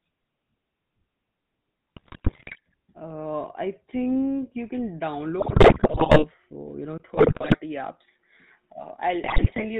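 A speech recording carried throughout by the GSM full-rate codec, whose buzzy, gravelly roughness and lack of anything above 4 kHz are plainly audible and fit the 13 kbps full-rate coder. Unlike clean narrowband filtering, the damage sits in the voice's texture, a steady rasp from the pulse-driven excitation. GSM bit errors break in at 1.96 to 2.59 s, at 5.40 to 6.25 s (after "think you can", before "uh you know"), at 7.14 to 7.56 s and at 9.24 to 9.64 s. Each burst brings squawks, pops and gargling as corrupted filter, pitch and gain values distort individual frames, which sets these apart from the codec's constant roughness. At 6.98 s, just after "uh you know", a 20 ms gap is followed by a narrower band with nothing above 3.8 kHz and a faint new noise floor far below the speech. The level stays about the same. This is likely an input switched to a poorer device, a change in tone and band at one fixed point that persists to the end rather than a passing glitch.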